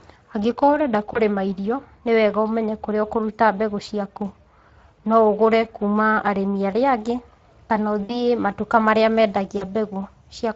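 The whole recording passes through the Speex codec at a rate that sounds like about 20 kbps. Its CELP excitation is coarsely coded, so the speech carries plainly audible hoarse, noisy roughness from start to finish.

At 1.13 s, just before "irio nĩ wega ũmenye", packets drop out for about 20 ms, which fits one lost frame. The decoder conceals the loss by extrapolating its last pitch and filter. The same VoIP packet loss concealed by the speech codec returns at 8.03 to 8.23 s, losing about 60 ms before "matuka marĩa", and at 9.57 s, losing about 40 ms right after "matuka marĩa". Each gap is filled by a stretched, fading extrapolation, and the voice stays weak for a moment after packets return.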